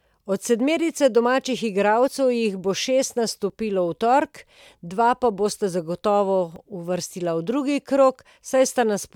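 Speech with two jumps at 3.50 s, after "jih bo šest", and 6.56 s, after "bosta zagotovo", each a skip of about 10 ms with no gap, likely a dropped buffer (overrun). The waveform shows a sudden discontinuity, and the spectrogram a thin vertical broadband line.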